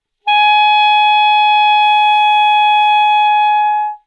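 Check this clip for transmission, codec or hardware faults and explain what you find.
Nothing to report: no faults are audible anywhere in the sound.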